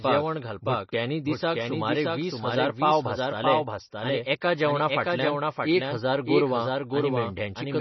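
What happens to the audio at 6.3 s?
At 6.3 s the clip carries two faults, both present from start to end rather than only at that moment.

The first is a doubled audio track. The sound is most likely being captured a second time through a slower path, or an edit is holding two copies out of step. A full-band copy trails the original by around 0.7 s at roughly 5 dB lower. It has no decay or room colour, so each sound is followed by a flat, dry repeat of itself.

The second is MP3 compression. Heavy codec damage points to a bitrate around 24 kbps, likely the cause of what is heard. With so few bits, the encoder drops weak frequency lines that flicker in and out between frames, and it removes everything above 5.9 kHz. The result is dull, watery and swirly, with s sounds turned to metallic chirps and attacks smeared.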